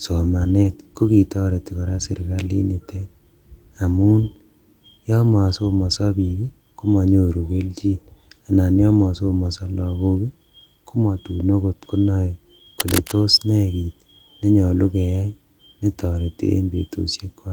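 At 0.63 s, 2.15 s and 5.63 s the speech turns briefly rough and grainy for about 20 ms each time, with no gap in the sound. From 8.99 to 9.05 s the same rougher texture lasts about 40 ms, which fits two lost packets in a row. These are lost packets rebuilt from error correction. The following packet carried a low-bitrate backup copy, and the decoder played that copy in place of the missing audio, so the sound continues but with lower fidelity.

From 12.80 to 13.12 s a dense, uneven scratching and rustling sits over the speech, only a little quieter than the voice itself. This is cable scratch noise, likely from a worn cable, connector or control being moved, so that its contact resistance jumps around rapidly.

At 16.13 s there is one more 20 ms moment of grainy, rebuilt-sounding audio, again a single packet recovered from its error-correction copy.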